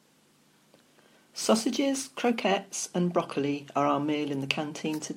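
From the start to 2.30 s, a crude rate conversion changed the sample rate by picking the nearest existing sample instead of filtering and interpolating. The error pattern fits a 48 kHz to 44.1 kHz conversion. The skipped samples leave a periodic error about 25 dB below the speech, which creates shifted, inharmonic copies of it. This is heard as a gritty, inharmonic fizz riding on the louder and brighter parts of the speech.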